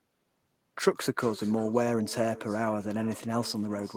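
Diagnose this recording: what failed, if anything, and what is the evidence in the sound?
Every phrase is shadowed by a thin copy about 17 dB down, trailing by roughly 400 ms throughout: echo with no canceller, a call-processing failure letting the far loudspeaker return through its microphone.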